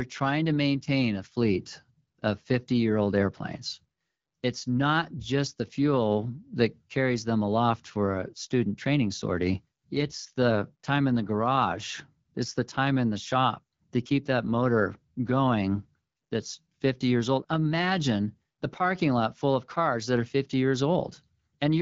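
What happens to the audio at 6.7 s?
Nothing goes wrong at 6.7 s: the speech carries straight through that moment intact, with only the light, steady coloration of the AMR wideband (HD Voice) codec at 12.65 kbit/s that runs through the whole clip.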